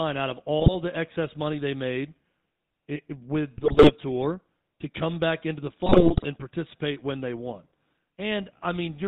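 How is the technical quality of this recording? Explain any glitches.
The technical quality is poor: the speech is band-limited and rough throughout, and it breaks up three times.

All the way through, the voice is buzzy and gravelly with nothing above 4 kHz. This is GSM full-rate codec damage, and it is plainly audible. The sound fits a 13 kbps GSM full-rate stream, which reduces the vocal tract to a filter and drives it with sparse, regularly spaced pulses.

From 0.6 to 0.74 s, 3.56 to 3.91 s, and 5.86 to 6.25 s, the speech squawks, pops and gargles. These are GSM bit errors. Corrupted filter, pitch or gain values reach the decoder, which warps the spectrum and makes the level jump frame by frame. The second and third bursts are longer and messier.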